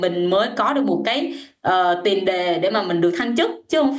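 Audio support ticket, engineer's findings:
Gain pumping throughout: loud and soft parts squashed closer in level, swing roughly 15 dB. Likely cause: excessive mic gain driving a fast limiter. Waveform shows flattened peaks.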